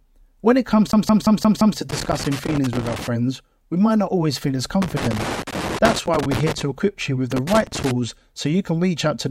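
A speech clip with two kinds of fault. From 0.92 to 1.78 s, just after "when it comes", it behaves like a CD stuck on one turn. A 0.17 s slice repeats five times, each jump marked by a brief mute. That is the quick, even stutter of a disc skipping back a track. Loose connector crackle follows in three bursts. The first runs from 1.90 to 3.07 s, after "when it comes to". The second runs from 4.82 to 6.62 s, between "not always feel as" and "equip you with". The third runs from 7.32 to 7.91 s. The signal is chopped into irregular scratching, as a worn contact makes and breaks.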